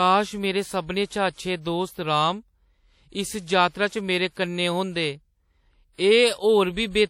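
From start to finish the speech carries plainly audible transform-codec damage, likely WMA compression, and the character points to an early WMA encoder running at around 48 kbps. Long transform blocks smear quantisation noise over tens of milliseconds, so consonants ring and a washy hiss swells and fades with the voice. On a spectrogram, content stops sharply at 16.5 kHz, and weak upper detail breaks into patchy, blocky holes where lines were zeroed.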